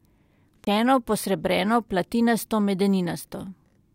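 A CD skip at 0.65 to 0.67 s: the laser jumped tracks, so the speech mutes for roughly 20 ms, then resumes from a different point.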